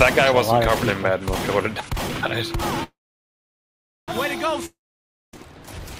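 The audio stops twice, and the two stops differ in what happens when sound returns. From 2.83 to 4.09 s there is a call audio freeze. The last sound carries on briefly as a fading buzz, then about 1.15 s of silence follows. When sound resumes it picks up exactly where it stopped, with nothing skipped, so everything afterwards runs about 1.24 s late. That points to packets likely held up in transit until the jitter buffer emptied. From 4.66 to 5.34 s there is a long network dropout. The onset is similar, a short fading tail and then roughly 0.59 s of silence. The difference is that the audio comes back further along, with about 0.68 s of material gone and no added delay, which fits audio lost in transit rather than delayed.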